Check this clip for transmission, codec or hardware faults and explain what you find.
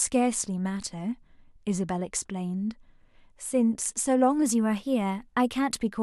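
One fault is present: a drift correction step near the end of the clip. From 4.42 s to 5.78 s the speech suddenly runs about 5.4% fast and sits about 92 cents sharp, close to a semitone. Then it snaps back to normal. Speed and pitch move together, so the voice sounds briefly hurried and higher. The likely cause is clock-matching software changing the playback rate in a single step to drain or refill its buffer.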